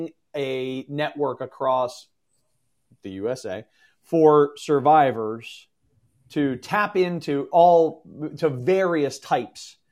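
Speech recording with no technical faults detected.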